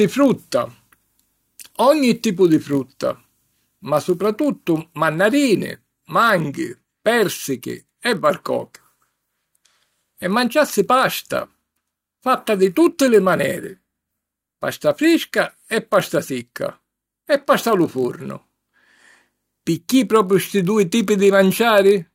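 Throughout, a block size mismatch (padded) zero-fills the tail of each block, consistent with 1024-sample reads, producing a 46.9 Hz buzz and slowing speech to 0.999 speed.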